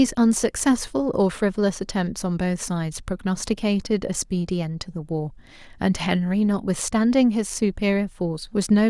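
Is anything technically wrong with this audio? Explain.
No, there's nothing technically wrong to point out here, so this speech recording can be taken as it is.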